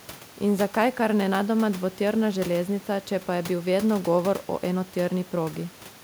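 No technical faults can be heard anywhere in this recording.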